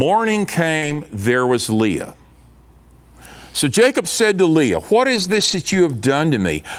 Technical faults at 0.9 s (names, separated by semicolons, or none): burst of packet loss; lost packet rebuilt from error correction